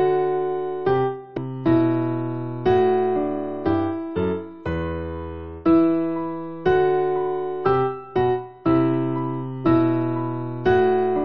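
At 1.36 s the sound breaks into a brief blip from damaged data in a compressed stream. Corrupted bytes at that point leave the decoder unable to read the frame properly, so it misreads or drops it while it loses sync and hunts for the next valid frame header. On a spectrogram this shows as a thin vertical stripe, and the waveform has an abrupt discontinuity lasting about 18 milliseconds.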